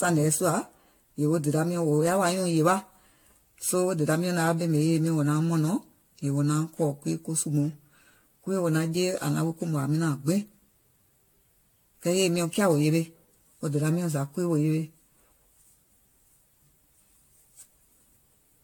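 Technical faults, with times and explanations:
Throughout, generation loss: the speech was likely re-encoded around seven times through an AAC-type codec, which fits about 96 kbit/s, compounding quantisation into swirly, hollow, smeared sound, blurred attacks, and nothing above 18.7 kHz.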